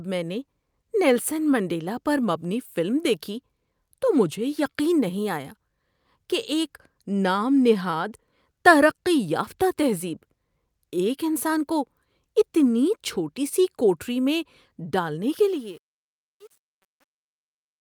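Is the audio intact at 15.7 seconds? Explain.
No. Truncation distortion on a fade runs from 15.35 s to 17.80 s, after "سی کوٹھری میں ڈالنے". The fade-out was rounded to too few steps without dither, likely around 9 bits, so from 15.61 s the fading speech turns gritty.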